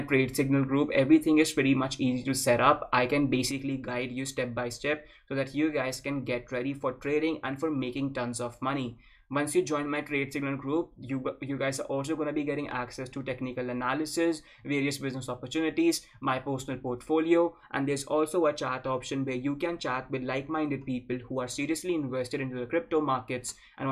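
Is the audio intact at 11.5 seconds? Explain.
No. From 3.51 s onward the level falls abruptly by about 6 dB, likely one channel dropping out. Unlike a gain cut, sound unique to that channel vanishes.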